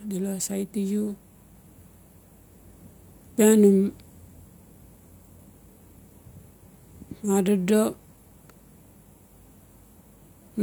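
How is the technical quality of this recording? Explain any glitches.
Nothing stood out as a technical problem on listening to this recording.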